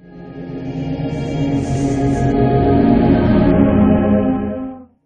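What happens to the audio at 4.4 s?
At 4.4 s the audio is inside a Bluetooth SBC bit pool drop that runs from 3.51 s to the end of the clip. The link has forced the encoder onto a much smaller bit budget, which points to a bit pool falling from around 31 to about 6, near 55 kbps. The highest sub-bands are starved of bits and the rest are coarsely quantised, so the treble goes dull while a gritty, grainy noise rides on the sound.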